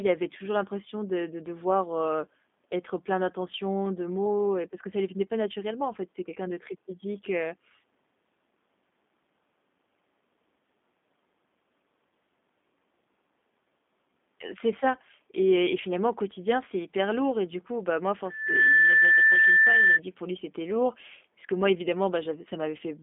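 From start to finish the speech carries G.729 codec damage, and it is plainly audible. The roughness and slightly synthetic, buzzy texture point to a low-rate VoIP coder, which fits 8 kbit/s. The voice is rebuilt from a vocal tract model, a pitch predictor and sparse pulses. The sound is confined to a telephone band of roughly 200 Hz to 3.6 kHz. On a spectrogram, everything above 3.7 kHz is empty, and the harmonics look smeared and grainy.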